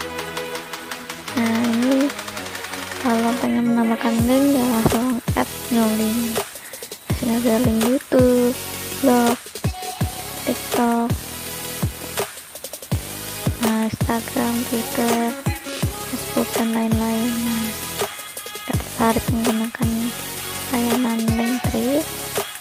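Nothing is technically wrong with this audio clip.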